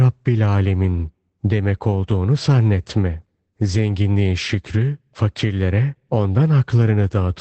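Throughout, Opus voice compression in SILK wideband mode, near 12 kbps by ear, drops everything above 8.6 kHz, leaving the speech muffled, hoarse and slightly robotic.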